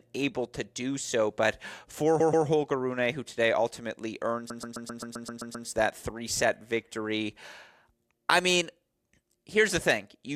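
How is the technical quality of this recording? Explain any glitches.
The recording has two stutters from repeated frames. A short run of compressed frames was delivered more than once, so the decoder replays the same block of about 131 ms, which fits five frames. After "do so but for", from 2.20 to 2.46 s, it plays twice more. After "who today ultimately", from 4.50 to 5.67 s, it loops nine more times before "that three set victory", adding about 1.2 s. Each repeat makes a choppy stutter.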